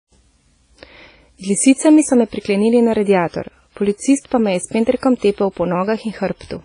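WMA compression damage runs throughout this speech recording: the voice sounds ringing and washy, with a hiss that swells and fades along with the syllables, and nothing at all comes through above 10.1 kHz. The likely cause is a transform codec working in long blocks, so quantisation noise smears across tens of milliseconds around each sound, while weaker spectral lines are discarded outright. The heavy damage fits a low bitrate of around 24 kbps.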